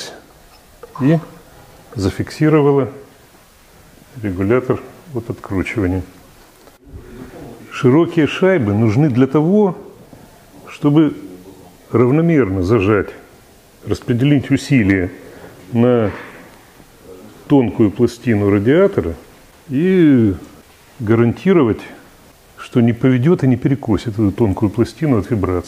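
At 14.90 to 14.92 s a peak drives a stage past its limit by about 2 dB, and the hard clipping squares off the waveform tops. That brief flattening sprays high harmonics, heard as a short, sharp crackle on the loud moment.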